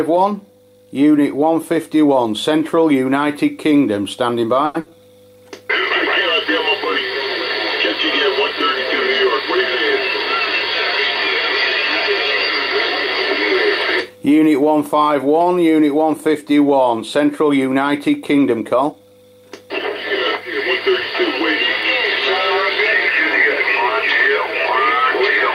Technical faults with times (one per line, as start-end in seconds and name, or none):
4.65-4.76 short stall from a late packet
4.80-4.96 burst of packet loss
18.31-19.07 jitter buffer speed-up